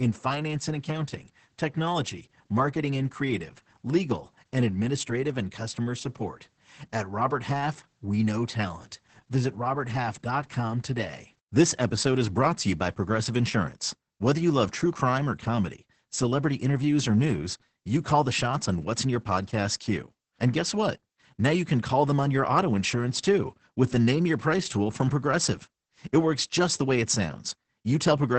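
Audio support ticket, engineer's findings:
Opus voice compression, throughout the clip. Speech muffled and hoarse, faintly robotic. Nothing above 8.7 kHz (wideband SILK band limit). Coarsely coded excitation roughens voicing. Heavy damage fits a low bitrate, around 10 kbps. Probable component: encoder bitrate setting.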